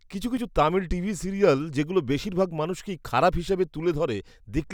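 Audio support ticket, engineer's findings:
Jumps at 0.37 s and 2.24 s, roughly 10 ms of speech skipped each time: likely dropped buffer (overrun), capture not read before overwrite. Waveform shows abrupt discontinuity; spectrogram shows thin vertical broadband line.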